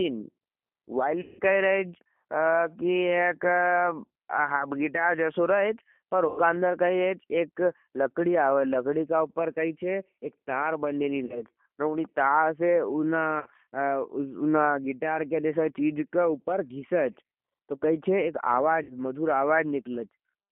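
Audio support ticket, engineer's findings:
G.729 codec, whole clip. Speech band-limited to about 200 Hz to 3.4 kHz, nothing above 4 kHz. Plainly audible rough, synthetic texture. Points to G.729A at 8 kbit/s, with speech rebuilt from a vocal tract filter, pitch predictor and sparse pulses per 10 ms frame.

VoIP packet loss concealed by the speech codec, five events: 1.21 to 1.41 s, before "कही रहे हज"; 6.28 to 6.40 s; 11.25 to 11.45 s, between "हज एक तार बन्देली" and "और उनी तार"; 13.40 to 13.48 s; 18.83 to 18.95 s, after "तो कही हज एक". Gaps of 40 to 180 ms, longest first. The decoder extends the last pitch and filter as a fading buzzy tone or coloured noise. Weak, distorted recovery afterwards.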